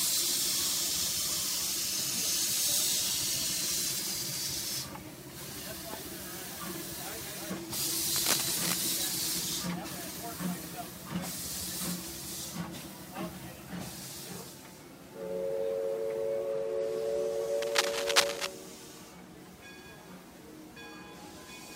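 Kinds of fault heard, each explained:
Cable scratch noise: two bursts of dense, uneven scratching sit over the sound, from 8.15 to 8.78 s at roughly the level of the sound itself, and from 17.62 to 18.46 s at roughly 5 dB above it. The likely cause is a worn cable, connector or control whose contact resistance jumps as it is moved. Unlike isolated digital clicks or steady hiss, each event is a rustling cluster that starts, churns irregularly, then stops.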